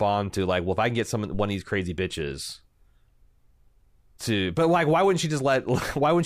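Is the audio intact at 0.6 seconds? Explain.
Yes, the speech at 0.6 s plays through intact, with no dropout, click, distortion or other fault at that moment.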